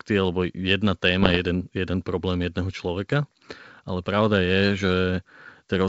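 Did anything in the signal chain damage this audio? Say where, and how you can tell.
Yes, there's a short burst of bit errors on an ADPCM link, in the transmission stage, from about 1.22 to 1.40 s. You hear pops and a rough, gritty patch with the level briefly jumping. Each flipped bit knocks the decoder's step size and predictor off, so every hit rings for a few milliseconds. That smear fits roughly nine damaged frames at an error rate of around one percent, riding on a G.722 link that itself sounds clean at 64 kbit/s.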